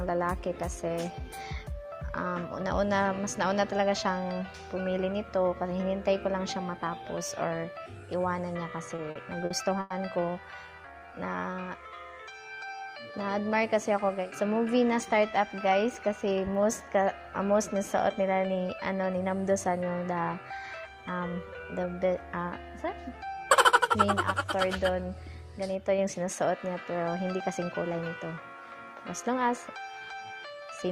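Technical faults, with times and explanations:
8.95 to 9.93 s, repeated stalls (stutter): four brief hitches, longest 100 ms, where the last sound is stretched because late packets left the jitter buffer empty.
10.85 to 11.14 s, jitter buffer slow-down: the sound drags to 86% speed at unchanged pitch as repeated pitch periods add 52 ms to rebuild the buffer.
21.46 to 21.65 s and 26.85 to 27.96 s, jitter buffer speed-up: the sound hurries, to 118% and then 109%, at the same pitch as short periods are cut, roughly 40 ms and 100 ms, to shed excess delay.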